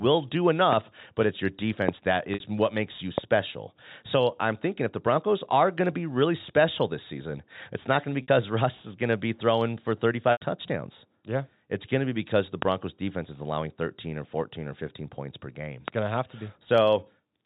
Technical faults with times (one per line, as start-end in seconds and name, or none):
1.89-1.91 loud pop
2.34-2.40 packet loss with pitch repetition
3.18-3.20 loud pop
8.22-8.28 packet loss with pitch repetition
10.32-10.41 packet loss with pitch repetition
12.62-12.64 loud pop
15.88-15.90 loud pop